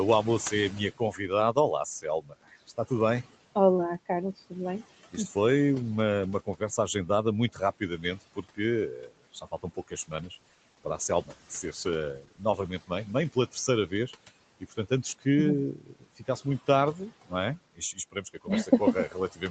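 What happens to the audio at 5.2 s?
At 5.2 s you're hearing noise suppressor artifacts, which run through the whole clip. The suppressor pulls down, frame by frame, whichever bands it judges to be steady room noise, by about 17 dB, so the background sinks in the pauses and comes back up under the speech.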